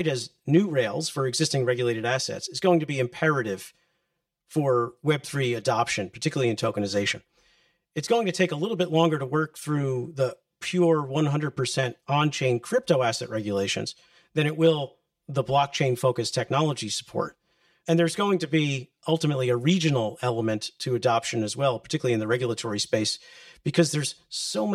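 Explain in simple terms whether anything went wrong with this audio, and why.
The speech sounds hollow and a little phasey from start to finish, as if heard down a tube. This is channel delay (comb filtering): one channel arrives about 5 ms late, and when both are mixed together, matching parts cancel at evenly spaced pitches starting around 100 Hz.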